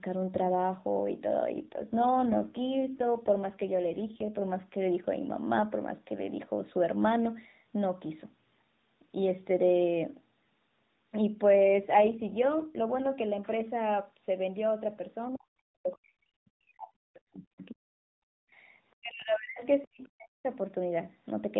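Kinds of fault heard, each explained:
AMR rate drop: The adaptive multi-rate codec is pushed from 12.2 kbps down to 5.9 kbps, trading speech detail for channel protection when the radio link weakens. It happens twice, from 1.50 to 4.48 s and from 11.57 to 13.07 s. The bandwidth stays at narrowband and nothing drops out, but the speech turns rougher and more synthetic in both stretches, then regains its smoother 12.2 kbps texture when the rate climbs back.
Speech suppressed in double talk: The talker's speech is pulled down hard, by about 40 dB at its deepest, at 15.27 to 18.28 s, 18.98 to 19.62 s and 19.84 to 20.49 s. It dips, loses its high end or cuts out in pieces rather than staying level. The likely cause is an echo canceller that, faced with both ends talking together, could not tell near speech from loudspeaker echo and attenuated everything.
Other side's voice leaking through: A faint second voice surfaces briefly from 15.93 to 15.97 s, about 30 dB below the main speech, as a short scrap inside the first suppressed stretch. 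This is likely far-end audio played on the talker's loudspeaker, picked up again by the microphone and not fully cancelled, so a short residue of the other party's voice gets through.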